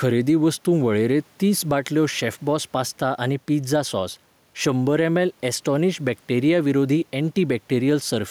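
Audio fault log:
Throughout, gain pumping. The speech level is pushed up hard, then pulled back down on each loud syllable. The gain swings by roughly 5 dB. The room noise sits about 41 dB below the speech. Loud and quiet parts are squeezed together. The likely cause is input gain set far too high, with a fast limiter clamping every peak.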